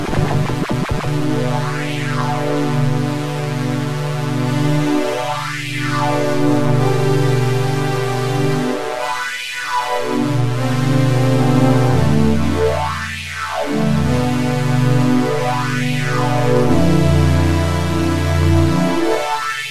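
No audible faults turn up anywhere in this recording.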